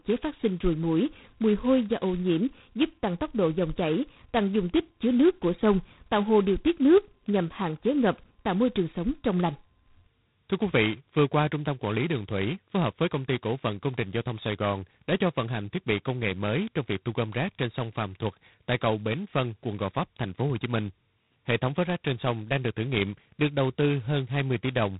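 Throughout, heavy G.726 ADPCM coding, at what sounds like 16 kbit/s, leaves a harsh, rasping hiss tracking the speech level, with nothing above 3.9 kHz.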